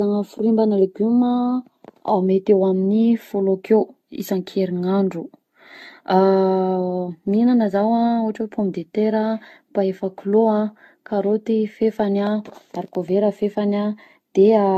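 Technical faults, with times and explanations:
Throughout, generation loss: the speech has likely been decoded and re-encoded many times over with a lossy codec, and the damage fits roughly ten passes through AAC-LC at around 64 kbit/s. Each pass re-quantises on a shifted frame grid, so the errors stack rather than repeat. The result is a swirly, hollow texture with smeared consonant attacks, worse than a single encode at that rate would give, and nothing remains above 14 kHz.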